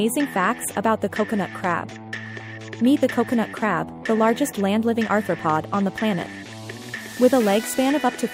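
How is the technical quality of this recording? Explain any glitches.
The technical quality of this recording is good, with no glitches to explain.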